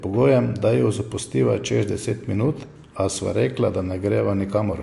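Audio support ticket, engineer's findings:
MP3 compression artefacts throughout the speech, full clip. Treble absent above about 11.3 kHz, a hard encoder cutoff. Plainly audible codec damage, likely a starved MP3 encoder, fitting roughly 52 kbps, zeroing weak frequency lines frame to frame. Unlike a plain low-pass filter, the damage is not only missing treble but unstable, frame-varying texture across the band. Unlike packet loss, it is continuous rather than gaps or dropouts.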